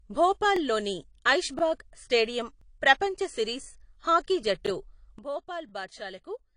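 Throughout, the speech sounds dull and warbly with nothing above 10.1 kHz, likely AAC compression at a rate pointing to about 32 kbps, distinct from plain low-pass filtering by its smearing. At 0.56, 1.59, 2.61, 3.64 and 4.66 s, overlapping chunks replay about 25 ms at each 1-second join, a regular stutter rather than random dropouts. At 5.19 s a sudden gain jump drops speech and background together by about 12 dB with no fade, likely an unramped gain change. The overlapping-chunk stutter recurs at 5.69 s.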